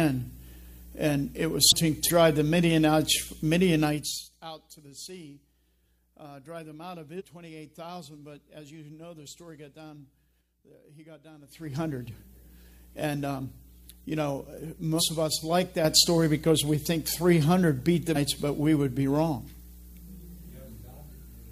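Compressed frames skipped first at 1.68 to 1.72 s, where the audio lurches forward by about a second, and again at 2.05 to 2.10 s, jumping roughly half a second. Whole compressed frames of 46.4 ms never reached playback, so the sound resumes a multiple of that length further on.

Zipper noise runs from 3.84 to 4.33 s as the level drops by about 20 dB in 2 dB steps, some thirty per second, with no smoothing between them. Each step leaves a tiny click, and together they make a fast ticking or zipping texture over the sound for as long as the level is moving.

Compressed frames skipped returns at 7.16 to 7.22 s, 14.96 to 15.02 s and 18.12 to 18.17 s. Each time, about half a second of audio vanishes in whole 46.4 ms frames.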